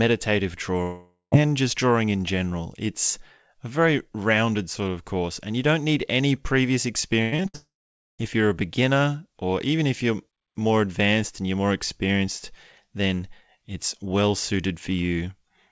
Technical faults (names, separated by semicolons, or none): long network dropout; repeated packet loss (robotic sound)